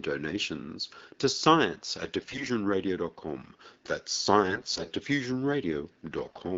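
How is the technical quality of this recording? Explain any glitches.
Three short stretches of hoarse, scratchy, gargling speech, at 2.20 to 2.45 s, 4.45 to 4.90 s and 6.17 to 6.39 s, disrupt the recording. These are AMR bit errors. Flipped low-priority bits, roughly one in seven in the first and last bursts and one in ten in the middle, misplace the excitation pulses and skew fine pitch, gain and spectral values, so pitch and loudness hold while texture degrades. The underlying AMR wideband (HD Voice) coding sounds consistent with around 12.65 kbit/s, with only light codec colouring.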